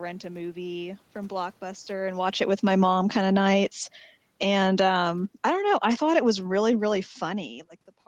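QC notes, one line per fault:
1.31–7.55 s, automatic gain falling: the automatic gain control judged the input too loud and pulled its gain down by about 14 dB over six seconds, so the speech and the room noise behind it sink together, unlike the talker's own movement near 2 s.
3.0–3.84 s, automatic gain rising: partway through that decline the gain control briefly reversed, lifting its gain by about 3 dB, so speech and background swell together for under a second before the overall downward drift resumes.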